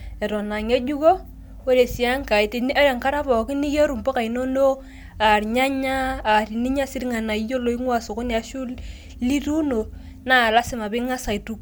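No audible technical faults.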